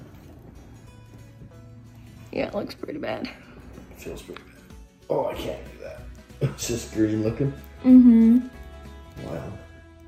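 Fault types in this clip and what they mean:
No faults can be heard.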